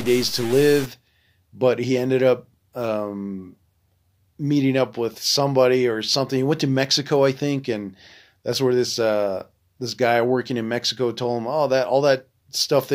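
Speech, opening with harsh, buzzy distortion from 0.0 to 0.86 s. Any pause in that stretch fills with a gritty noise floor. The likely cause is a stuck bit, one data bit held fixed, throwing samples off by a step of about -30 dBFS.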